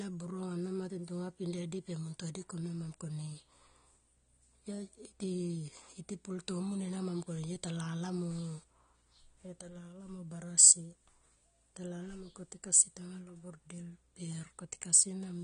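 From start to finish, the speech is dull, with nothing above about 9.7 kHz. Sibilants sound smeared and fizzy, with a warbling edge. This is plainly audible codec damage, likely from AAC compression at a low bitrate, around 32 kbps, which discards high bands.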